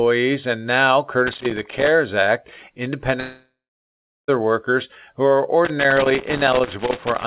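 A worn or dirty contact in the signal chain of this speech recording is making and breaking as it moves, which is loose connector crackle: the signal is chopped into irregular bursts of scratching from 1.27 to 1.88 s, and again from 5.65 s through to the end. A likely long network dropout then cuts off the incoming audio from 3.2 to 4.31 s. The receiver carries the last sound on as a fading buzz or hiss before about 0.73 s of silence or low steady noise, and the speech resumes at 4.31 s with roughly 1.08 s of it gone for good. The audio also has nothing above 4 kHz, consistent with a G.711 mu-law telephone codec at 64 kbps on the call path.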